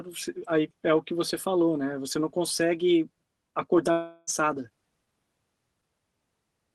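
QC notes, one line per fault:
3.91–4.30 s, long network dropout: packets likely stopped arriving, so the receiver stretched the last sound into a fading buzz, and speech returns with 0.36 s lost.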